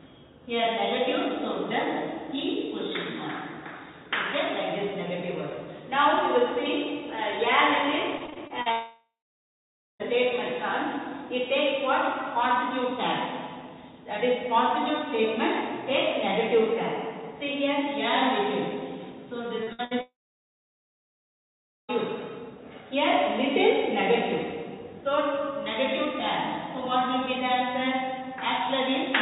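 Repeated packet loss (robotic sound) runs from 8.18 to 8.68 s. Six separate gaps, the longest 40 ms, are each patched by extending the preceding sound, so roughly a quarter of that half-second is synthetic. The result is choppy, with fragments missing.

A long network dropout follows from 8.72 to 10.01 s. After a brief fading continuation of the last sound, about 0.9 s of near-silence remains, and the audio resumes without the missing 1.3 s. The likely cause is the stream stopping arriving altogether.

Short concealed packet loss at 19.63–19.69 s removes 40 ms. The receiver bridges it by extrapolating the prior sound and blending back, leaving a brief smear or wobble.

A burst of packet loss at 19.73–19.81 s, and another at 19.85–19.93 s, each drop 60 ms. In both, the last sound is held and faded as a buzz or hiss, then playback jumps ahead past the lost portion.

A second long network dropout runs from 20.01 to 21.90 s, again likely a complete interruption of incoming audio. 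A short decaying tail gives way to about 1.8 s of silence, and nearly 1.9 s of audio never returns. Throughout, nothing sounds above 4 kHz, which fits narrowband G.711 A-law call coding.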